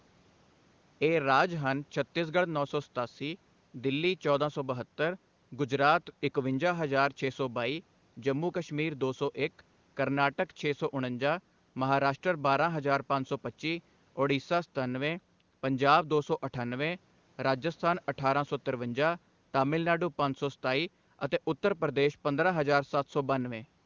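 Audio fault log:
No faults in this clip.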